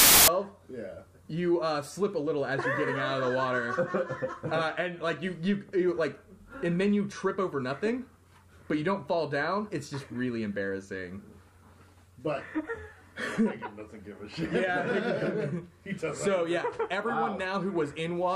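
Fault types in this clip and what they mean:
File tags played as audio, 0.00 to 0.28 s: an embedded cover picture, stored as compressed data, is read as if it were samples, so the clip opens with a hard-edged burst of very loud white noise lasting about a quarter of a second.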